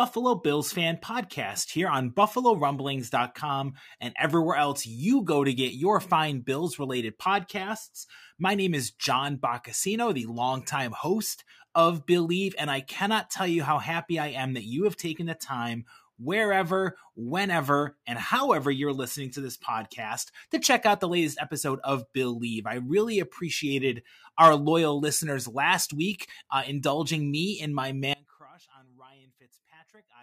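Audio dropout to a faint residue at 28.13 s, after "indulging me in my": the sound cuts abruptly to a faint leak through the end, likely from a lost feed.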